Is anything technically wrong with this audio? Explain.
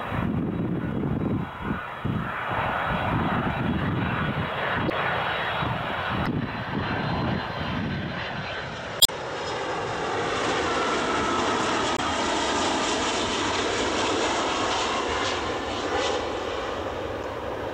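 Yes. There is damaged data in a compressed stream at 4.87–4.92, 6.23–6.28, 8.98–9.10, 11.95–12.00 and 17.21–17.25 s. Corrupted frames make the decoder lose sync, producing brief chirps or blips.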